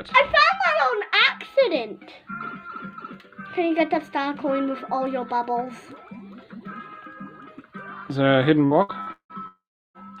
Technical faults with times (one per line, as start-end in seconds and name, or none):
8.65-9.32 repeated packet loss (robotic sound)
9.47-9.97 long network dropout